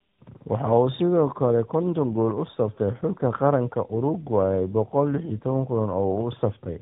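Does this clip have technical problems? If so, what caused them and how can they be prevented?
Yes. Throughout, the speech sounds rough, muffled and warbly, with nothing above 3.8 kHz. This is tandem speech coding: two speech codecs in a row, the second re-encoding the first's degraded output, which fits a GSM full-rate leg followed by AMR-NB. To prevent it, keep one codec end to end or use transcoder-free operation so the speech is compressed only once.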